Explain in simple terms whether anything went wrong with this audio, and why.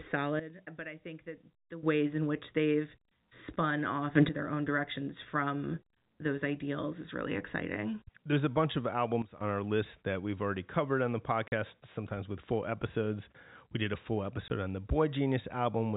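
Yes, two things go wrong. The speech suddenly turns much quieter from 0.40 to 1.83 s and again from 9.22 to 9.41 s, after "a bunch of". It turns abruptly louder from 4.15 to 4.29 s, after "which they've spun off". These are sudden gain jumps, likely a volume setting applied instantly with no smooth fade.

The speech briefly drops out at 11.48 s for 40 ms and at 14.48 s for 20 ms, between "did a full" and "on the". That is packet loss filled with silence: pieces of the audio went missing in transit, and plain silence was played in their place.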